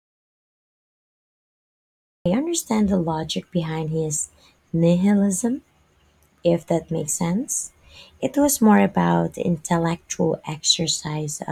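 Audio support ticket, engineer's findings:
Audio dropout to silence, 0 to 2.26 s, already under way at start: flat waveform, blank spectrogram, no room tone. Likely input loss, recorder writing silence. Speech resumes mid-flow at "understand the logic behind".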